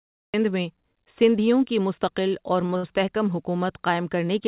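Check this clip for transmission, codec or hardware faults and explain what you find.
Two kinds of fault are present: a cut-off start and a pair of short stalls from late packets, heard over a narrowband call path with nothing above 4 kHz, which fits G.711 mu-law at 64 kbps.

The cut-off start comes from capture beginning late. The clip sits in digital silence until 0.34 s, then drops straight into speech already in progress, with no natural onset or fade-in, so the first sound arrives abruptly and clipped.

The short stalls from late packets happen because packets missed their playout time and the jitter buffer ran dry. From 2.66 to 2.71 s, then from 2.77 to 2.85 s, the receiver held the last sound for about 28 ms and then 60 ms before resuming where it left off. Nothing is lost, but the speech briefly drags with a faint buzz or dip.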